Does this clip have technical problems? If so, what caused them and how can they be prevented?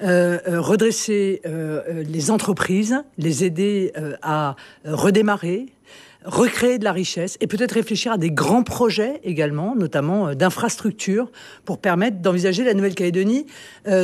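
No, nothing stood out as a technical problem on listening, so there is nothing here that needs preventing.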